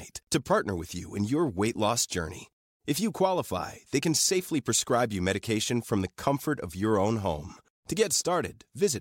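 Nothing technical stands out in this short bit of speech; there's no fault to point to anywhere in it.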